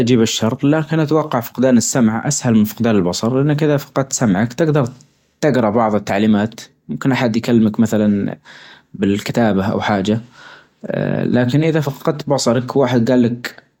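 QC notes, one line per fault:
No faults were heard in this speech clip. There is nothing to log.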